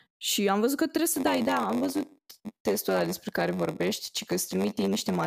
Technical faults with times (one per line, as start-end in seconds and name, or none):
1.11-5.26 block size mismatch (padded)